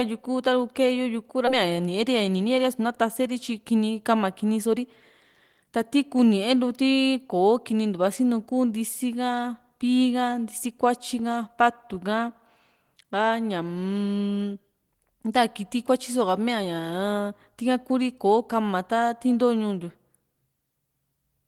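At 1.47 s the speech lurches forward with no pause, and about a second of talk is simply gone, the two sides butted together. This is a skip ahead: a block of audio was discarded, in transit or by an overflowing jitter buffer, while later audio was already waiting.

From 1.63 to 2.85 s, just before "taseeri tyi kini", the talker sounds slightly rushed, running about 7 percent fast at unchanged pitch. This jitter buffer speed-up came from the receiver trimming many tiny pitch-period slices, roughly a tenth of a second in all, to shed excess buffered delay.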